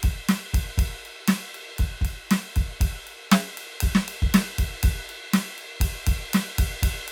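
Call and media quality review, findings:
No faults found in this music clip. Nothing to escalate.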